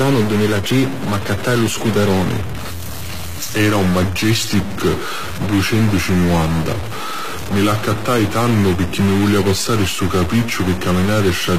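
Stuck bit, throughout this speech recording: a distortion rides on every sound, and the pauses fill with a gritty noise floor instead of falling quiet. That points to a data bit likely frozen at one value, shifting about half of all samples by a fixed amount that follows the waveform's shape and sign. HE-AAC compression, also throughout: the treble is synthetic, with s sounds turning lispy and metallic and nothing above 14.9 kHz. The damage is plainly audible and fits HE-AAC v2 at around 20 kbps, which likely rebuilt the top band by copying lower bands upward, so the harmonics there no longer line up. Section at the wrong speed, from 2.32 s to the end: the voice turns deeper and slower, playing at 0.893 times its original speed and roughly two semitones low, which suggests the section was likely fitted to the wrong clock so that pitch and tempo dropped together.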